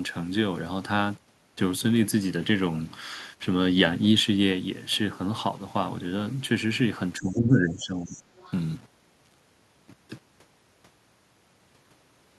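Low bit depth without dither runs through the whole speech clip: a grainy distortion that shifts with the voice, with error noise roughly 35 dB below the speech, which fits an 8-bit signal. The likely cause is rounding the samples to so few levels with no dither, so quiet passages turn gritty.

Speech suppressed in double talk occurs from 7.19 to 8.32 s. For about a second, the voice dips by as much as roughly 15 dB. This likely happened because the echo canceller could not separate the talker from loudspeaker echo while both sides spoke, and it turned everything down.

The other side's voice leaks through from 8.15 to 8.19 s and again from 8.36 to 8.52 s. Faint scraps of a second voice sit roughly 25 dB and then 30 dB below the speech. Their likely source is loudspeaker playback that the echo canceller failed to fully remove from the microphone.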